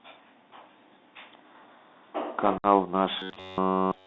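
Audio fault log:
Throughout: Bluetooth CVSD headset codec. The speech is boxed into roughly 200 Hz to 3.7 kHz, with scratchy sibilants, strained loud bright moments, and a grainy hiss underneath. This fits a 64 kbps CVSD link, where one-bit up/down steps with an adapting size lag behind fast, loud changes.
2.58 to 2.65 s: unconcealed Bluetooth headset packet loss. A sharp-edged gap of about 60 ms cuts into the speech, coming back briefly quieter. It points to around seven short headset packets dropped in a row and replaced by silence or an idle pattern instead of being concealed.
3.20 to 4.07 s: robotic sound from repeated short buffers. The voice turns into a rigid metallic buzz near 94 Hz that only loosely tracks the speech until the end. It is likely caused by nearly all incoming audio being skipped while a buffer of roughly 10.6 ms is looped, which imposes that fixed pitch.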